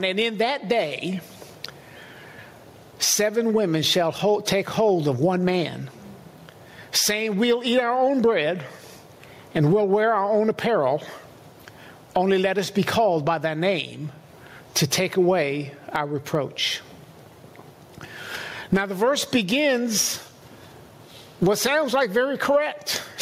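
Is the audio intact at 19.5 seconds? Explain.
No. Gain pumping runs through the whole clip, including 19.5 seconds: the input gain is likely set far too high, so a fast limiter clamps down on each loud sound. The gain swings around 25 dB, leaving everything squashed.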